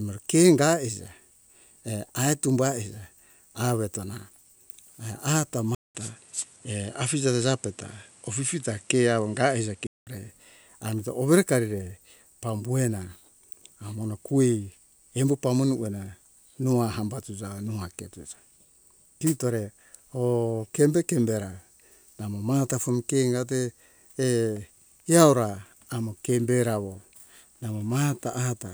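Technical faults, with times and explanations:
5.75 to 10.07 s, input switched to a poorer device: after a 200 ms gap the speech turns duller, with nothing above 11.4 kHz, a faint new background noise some 40 dB down and no real loudness change, then clears again; recording likely shifted to a narrower-band microphone.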